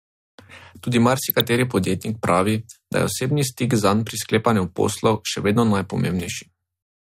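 DAB burbling runs from 1.29 to 1.41 s in this speech, just before "podjetnik pravi da je". Weak reception let bit errors slip past the error correction into the MP2 data, at a rate of well under one percent. Corrupted samples put short blips of noise in single sub-bands. The result is a brief burble over the sound, and its length fits roughly half a dozen damaged frames.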